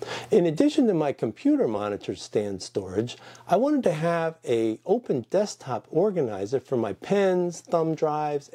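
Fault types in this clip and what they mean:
No technical fault can be heard anywhere in this audio. There are no dropouts, clicks, distortion or other glitches to report.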